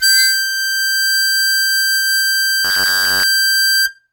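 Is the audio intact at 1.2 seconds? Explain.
Yes, at 1.2 seconds the music plays through intact, with no dropout, click, distortion or other fault at that moment.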